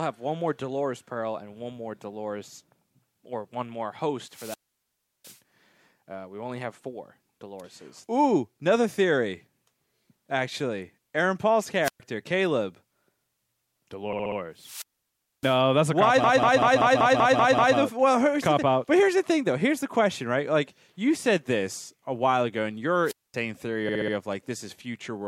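Squelch dropouts hit at 4.28–5.39 s and 11.83–12.00 s. The radio link fades, hiss rises, and the receiver mutes the sound, for about 0.7 s and then 0.12 s. At 14.13–14.38 s, repeated frames stutter: one 64 ms block replays four extra times. Another squelch dropout follows at 14.57–15.60 s, muting about 0.6 s before "that's a cop why". After those words, at 16.24–17.78 s, a 192 ms block repeats eight extra times, adding about 1.5 s. Between "a while ago and" and "theory of", at 23.04–23.35 s, the squelch cuts about 0.23 s. A final 64 ms stutter repeats at 23.89–24.14 s.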